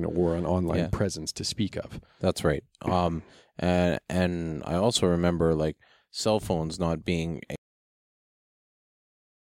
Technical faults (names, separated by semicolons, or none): cut-off end